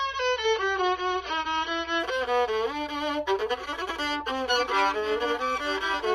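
For the first 2.0 seconds the audio sounds dull, with nothing above roughly 6.3 kHz and more obvious codec grit, and then at 2.0 s it suddenly opens up with no gap or dropout. That's an adaptive stream starting at a low bitrate: the player grabbed a lean version so playback could begin fast, then switched up once it had measured the connection. The early band-limiting fits something like 24 kbit/s AAC stepping up to around 96 kbit/s.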